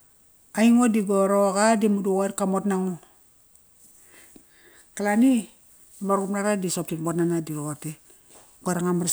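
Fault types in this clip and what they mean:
No technical faults can be heard anywhere in the speech. There is nothing here to list.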